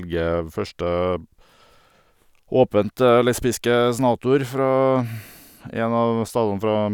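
Nothing in the signal points to a technical fault at any moment in the recording.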